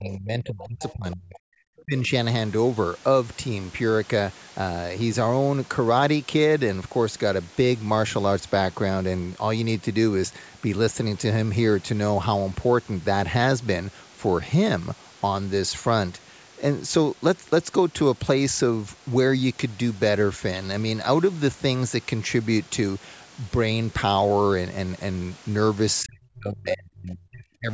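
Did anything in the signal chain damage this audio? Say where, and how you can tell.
Yes, in call processing: speech suppressed in double talk at 0.00–1.64 s, 1.82–2.12 s and 26.03–27.73 s, with waveform gaps about 30–35 dB deep, likely an echo canceller ducking.

Other side's voice leaking through at 0.59–0.93 s, about 20 dB under the talker, shows as faint extra harmonic traces on the spectrogram: likely residual loudspeaker echo the canceller missed.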